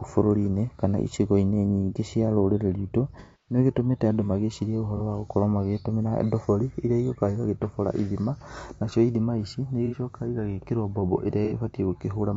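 The speech has a rough, grainy texture from start to finish, with noise filling the gaps between harmonics and a thin, somewhat synthetic top band. This plainly audible damage is likely low-delay AAC compression (AAC-ELD), whose short frames resolve pitch harmonics poorly and leave too few bits for clean detail at a rate that sounds like around 32 kbps.

AAC frame loss with concealment interrupts the audio four times. Each time the decoder patches the gap by extrapolating from the last good spectrum. The longest run, from 3.20 to 3.58 s, smears into a noisy, phasey stretch that sags in level before recovering. Shorter dropouts from 4.97 to 5.01 s, after "andũ magĩcirie", and from 9.86 to 9.95 s, after "ithima ici", come across as brief blurred flickers. A final one from 11.45 to 11.53 s follows "igagĩkĩrwo mbombo".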